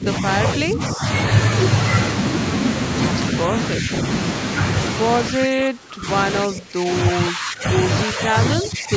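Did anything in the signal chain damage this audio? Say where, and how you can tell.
Yes, in call processing: speech dips at 0–0.39, 0.58–1.04, 3.8–3.92, 5.32–6.08, 6.45–6.9, 7.12–7.66, 8.05–8.36 and 8.56–8.95 s, by up to about 20 dB. This is likely speech suppressed in double talk, where the echo canceller mistook near-end speech for echo.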